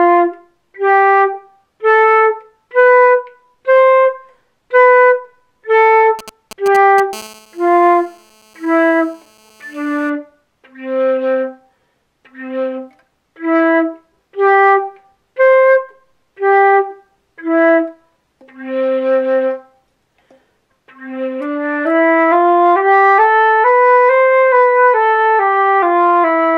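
From 6.19 to 7.15 s, GSM signalling bursts break into the audio. A 2G phone close by is sending short groups of radio pulses, the kind it makes while setting up a call. The audio circuit rectifies these pulses into sound. The result is a galloping dit-dit-dit of brief buzzes. Each buzz repeats at 216.7 Hz. The pattern sits roughly 15 dB below the wanted signal.

At 7.15 s the pattern turns into a steady GSM phone buzz, which lasts until 10.10 s. The phone is now in a call and transmits without gaps between burst groups. It still sends its radio bursts 216.7 times a second. Rectified, they become a hard, raspy tone rich in harmonics. The tone has no relation to the wanted signal. It sits about 29 dB below that signal, quieter than the bursts before it.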